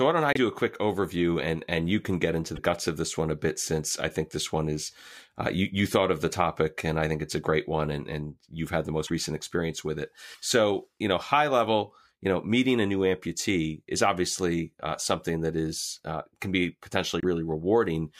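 At 0.33, 2.55 (after "you can get into"), 9.05 (after "and you've had the"), 10.33 and 17.20 s, the speech skips ahead with a 40 to 70 ms chirp or noise burst, likely a broken MP3 bit reservoir after lost frames. Each shows as a waveform discontinuity and a vertical broadband smear or gap.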